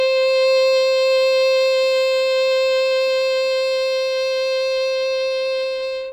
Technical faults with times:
none

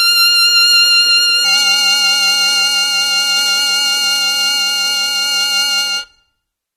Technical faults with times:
0.00-6.76 AAC compression
1.45-6.76 periodic clock jitter

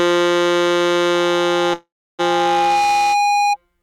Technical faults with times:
1.13-3.57 loudspeaker feedback squeal
1.73-2.21 call audio freeze

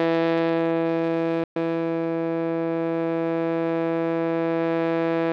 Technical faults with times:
1.44-1.56 playback stall
1.56-2.36 time-compressed catch-up

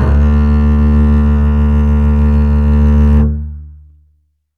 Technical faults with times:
none

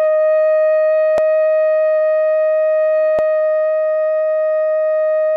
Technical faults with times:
1.18 overlapping chunks
3.19 overlapping chunks

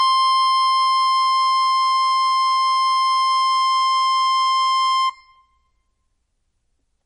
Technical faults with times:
0.00-7.05 MP3 compression

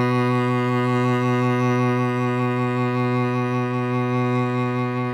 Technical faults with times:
none

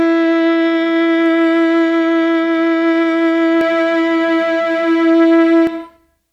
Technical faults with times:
3.61-5.67 doubled audio track

